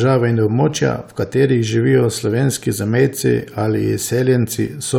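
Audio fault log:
Nothing to log here; the speech in this clip has no audible faults at any point.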